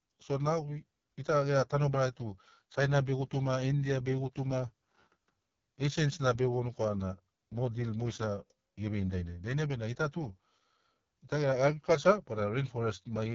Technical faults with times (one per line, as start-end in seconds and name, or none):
0.00-13.34 AMR wideband (HD Voice) codec